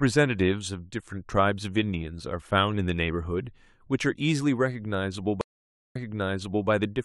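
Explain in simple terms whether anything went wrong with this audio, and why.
At 5.41 s the speech stops for about half a second in a stream reconnect: the connection broke and playback restarted. It resumes 0.74 s earlier, repeating a moment already heard, which a simple dropout wouldn't do, and settles by 6.69 s.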